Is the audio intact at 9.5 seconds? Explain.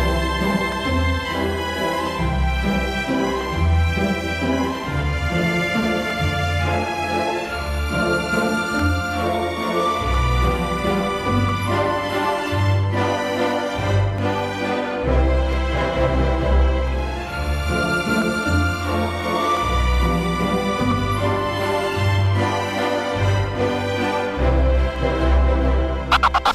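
No. From 0.72 s to 26.31 s a click recurs every 1.35 s, likely clock drift buffer slips: two mismatched clocks, off by roughly 300 ppm, forcing around 15 samples to be dropped or repeated. Each slip shows as a waveform discontinuity and a thin vertical broadband line on a spectrogram.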